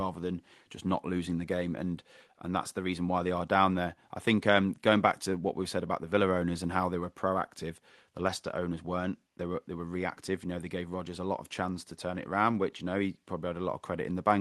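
No technical faults can be heard in this speech recording.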